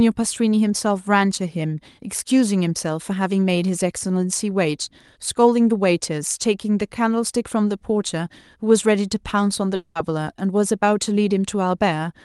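Long network dropout, 9.75 to 9.97 s: a fading buzz replaces about 0.2 s of speech, likely the receiver concealing lost packets, and the missing part never returns.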